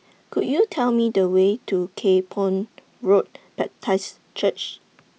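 No technical faults are audible anywhere in this speech recording.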